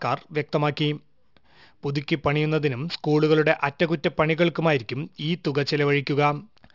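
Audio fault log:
Throughout: aliasing. Sibilants and other bright speech sounds come out gritty and metallic, with hissy tones at pitches that don't belong, and the spectrum stays full right up to a hard edge at 6 kHz. That fold point suggests a drop from 48 kHz to 12 kHz with no low-pass filter first. Energy above 6 kHz was mirrored back down as false tones, sitting roughly 25 dB below the speech.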